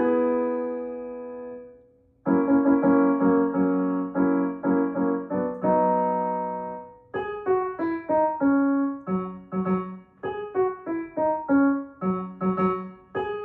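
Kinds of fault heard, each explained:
No faults can be heard anywhere in this audio.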